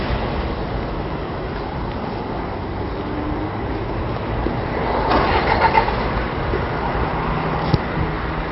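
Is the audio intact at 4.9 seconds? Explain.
No. At 4.9 s, as across the whole clip, the sound carries MP3 compression damage: nothing is left above about 5.6 kHz, and what remains has a watery, swirling quality with metallic chirps on bright, noisy parts and smeared attacks. The likely cause is an encoder starved of bits, consistent with a rate around 32 kbps, which cuts the treble and toggles weak frequency lines on and off between frames. A simple low-pass filter would dull the top without that flickering, swirly texture.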